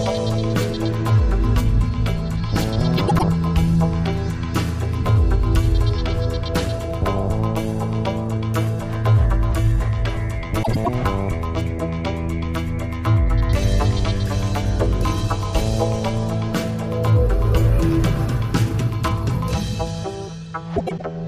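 Brief garbled flutters occur at 2.97, 10.63 and 20.76 s, each lasting about 0.26 s. These are frames out of order: two adjacent runs, which fits about 104.5 ms of four frames each, were decoded swapped.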